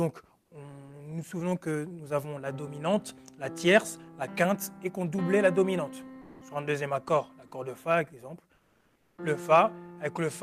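From 0.41 to 0.51 s, the sender likely stopped transmitting during a pause, in the manner of Opus DTX, and the receiver substituted comfort noise in place of the background. The quiet bed, about 41 dB below the loud parts, becomes a smooth, featureless hiss about 12 dB lower for 100 ms.

From 6.21 to 6.41 s, the voice detector likely mistook real sound for background and stopped sending. This is sound dropped by the voice detector: 200 ms of audio vanishes into steady filler noise before returning.

From 8.55 to 9.17 s, comfort noise again replaces the background, which sits about 46 dB below the loud parts, for 620 ms. The level stays the same, but the texture turns flat and uniform.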